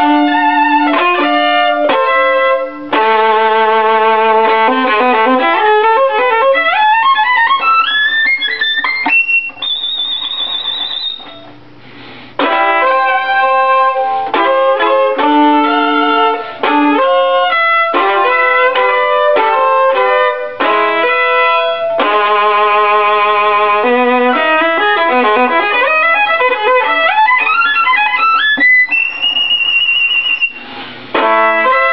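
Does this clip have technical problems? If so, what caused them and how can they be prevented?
No, there are no technical faults to point to anywhere in this audio. With nothing going wrong, there is nothing here that calls for prevention.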